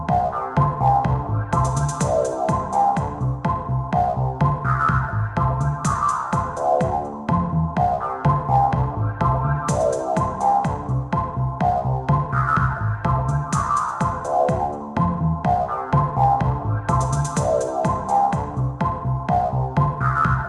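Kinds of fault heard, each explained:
No technical fault can be heard anywhere in the audio. There is nothing here to list.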